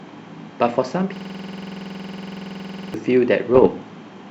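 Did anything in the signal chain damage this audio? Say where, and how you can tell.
Yes. From 1.16 to 2.94 s the speech turns into a rapid exact repetition: one fragment of about 46 ms repeats exactly, around forty times, at a steady 21.5 Hz rate. That is a system hang loop at the driver or buffer stage. The host stopped supplying new audio while the output hardware kept replaying the same ring buffer. The loop length fits a 2048-sample buffer.

From 3.55 to 3.67 s there is a brief cluster of pops and gritty bursts, with the level jumping for an instant. These are bit errors on an ADPCM link at the transmission stage. Because ADPCM codes each sample as a difference from a prediction, a flipped bit corrupts the decoder's step size and predictor as well as the sample itself. The disturbance therefore rings on for a few milliseconds rather than clicking once. The short span points to a handful of damaged frames at an error rate of a few tenths of a percent. 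Apart from these errors, the G.722 coding at 64 kbit/s shows no more than faint damage of its own.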